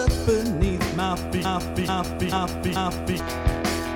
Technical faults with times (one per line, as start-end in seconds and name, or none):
1.45-3.20 broken-record loop